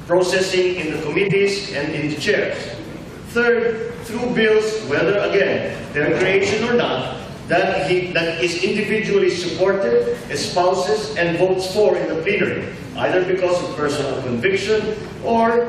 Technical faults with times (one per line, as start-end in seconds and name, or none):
1.27-1.32 compressed frames skipped
2.71-2.75 compressed frames skipped
8.63-8.67 compressed frames skipped